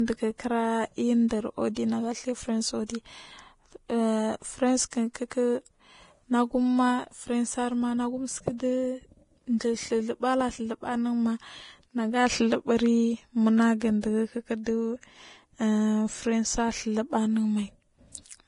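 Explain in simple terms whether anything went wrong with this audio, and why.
Throughout the speech, the sound is dull and grainy: nothing is heard above about 10.5 kHz, the crisp top end is replaced by a fizzy hiss, and sharp consonants sound blurred. That pattern points to heavy Vorbis compression, most likely from squeezing the file very small. Unlike a simple muffling filter, which just dulls the sound, this also adds roughness and noise where fine detail used to be.

There is also pre-echo at 1.28 to 1.31 s, 4.90 to 4.93 s, 5.14 s and 14.01 to 14.03 s. Just before a sudden, sharp sound, a brief hiss creeps in for roughly 17 to 25 milliseconds. The compression handles audio in short chunks and spreads its noise evenly across each one, so noise meant for the loud onset leaks into the quiet instant before it. Unlike a real echo, it comes before the sound, not after.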